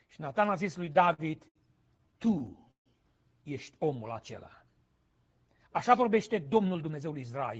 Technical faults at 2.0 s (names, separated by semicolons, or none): repeated stalls (stutter)